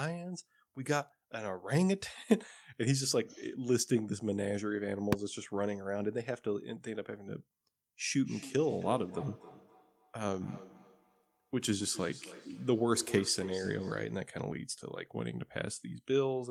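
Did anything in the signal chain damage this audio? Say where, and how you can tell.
Yes. At 5.13 s, invalid numbers at full scale: a failed calculation, clamped at format conversion, produces one sharp bang about 1.45 ms long, fitting a 64-sample block, not an ordinary click.

From 8.25 to 14.35 s there is feedback echo between two devices on the call. The speech returns roughly every third of a second at up to about -14 dB, thinner and more ringing with each pass, unlike smooth room reverb.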